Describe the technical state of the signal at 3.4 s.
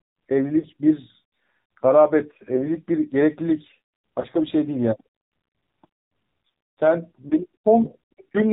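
At 3.4 s the speech carries AMR narrowband mobile codec damage, present for the whole clip. This codec samples at 8 kHz and rebuilds speech from a vocal tract model excited by a few pulses per 5 ms subframe. Nothing above 4 kHz survives, so the sound is muffled and phone-like. The damage is plainly audible: buzzy, synthetic tone. That coarseness fits a low bitrate near 7.4 kbps.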